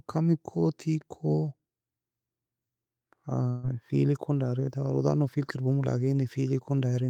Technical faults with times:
3.49-3.65 burst of packet loss

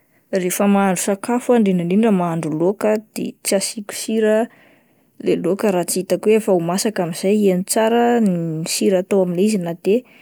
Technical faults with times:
none

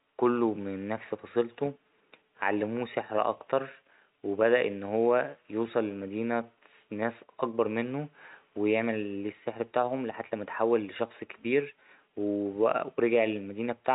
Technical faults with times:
none

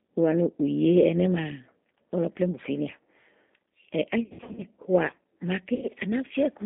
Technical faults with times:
0.00-6.65 G.729 codec
4.23-4.62 VoIP packet loss concealed by the speech codec
5.75-5.87 VoIP packet loss concealed by the speech codec

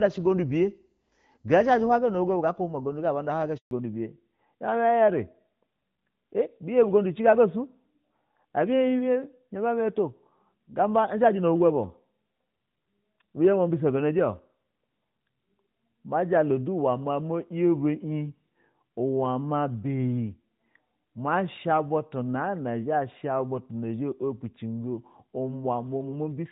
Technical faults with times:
3.57-3.71 handover gap
3.71-26.51 fallback to narrowband

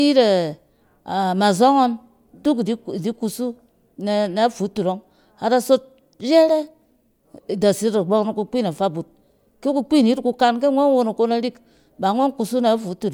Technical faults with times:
none

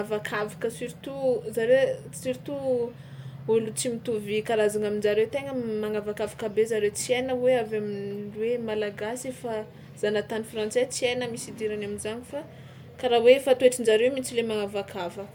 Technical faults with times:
none

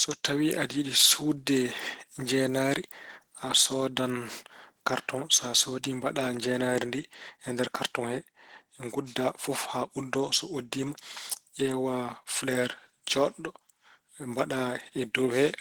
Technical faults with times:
0.00-15.60 Opus compression

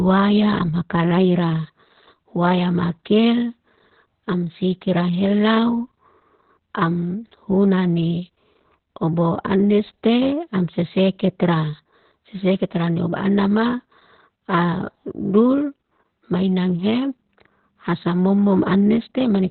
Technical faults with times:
0.00-19.50 Opus voice compression

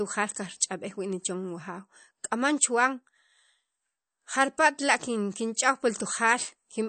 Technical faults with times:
0.00-6.89 MP3 compression

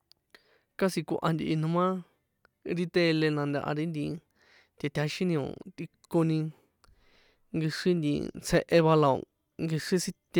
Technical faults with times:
none

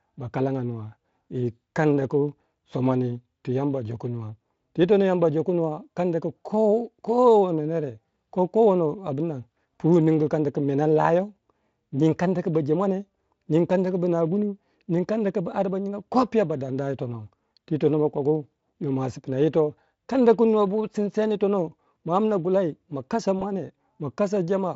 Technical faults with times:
23.39-23.43 VoIP packet loss concealed by the speech codec

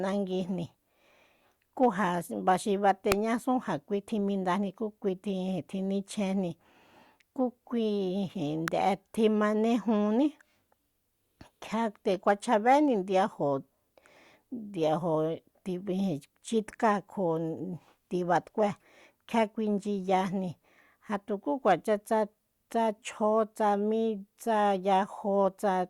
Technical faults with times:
3.12 electrical switching spike
8.68 electrical switching spike

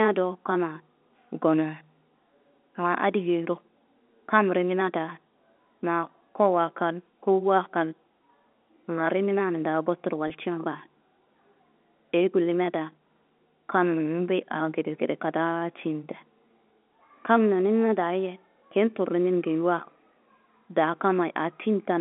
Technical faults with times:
10.28-10.30 packet loss with pitch repetition

